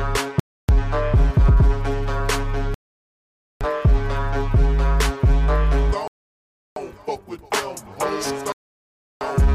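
At 0.40 to 0.69 s, 2.74 to 3.61 s, 6.08 to 6.76 s and 8.52 to 9.21 s the audio drops to silence for 0.29 to 0.87 s, then resumes where it stopped. These are Bluetooth stalls, likely from interference starving the headphone buffer. Unlike a codec dropout, each is a clean, complete gap rather than garbled sound.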